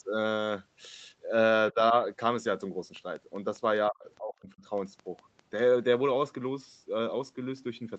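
Speech with two kinds of fault. Speech suppressed in double talk, likely from an echo canceller treating overlapping far-end audio as echo, dips the level by about 15 dB from 1.72 to 1.94 s and far deeper, about 35 dB, between 3.9 and 4.62 s. These appear as sudden notches in the waveform envelope and faded spectrogram bands. A train of clicks, likely from interference or a faulty connection, ticks regularly at about 5 per second from 2.96 to 5.60 s, around fifteen pops reaching speech level. They appear as thin full-height vertical lines across the spectrogram, below the Opus call path's 8 kHz ceiling, and as evenly spaced waveform spikes.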